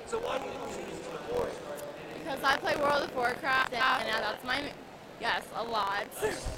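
Throughout, buffer tearing adds a rattling buzz at 43.1 Hz, which fits a 1024-sample buffer. A small slice of each period replays audio from a lap earlier, and unlike mains hum it vanishes in silence. From 0.41 to 0.71 s and again from 3.61 to 4.00 s, frames out of order produce a garbled flutter. Neighbouring blocks of 139.3 ms and 185.8 ms are swapped, and, unlike a dropout, no time goes missing.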